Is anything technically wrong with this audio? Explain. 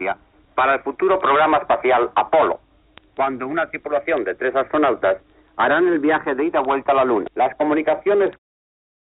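No, nothing is technically wrong with this audio.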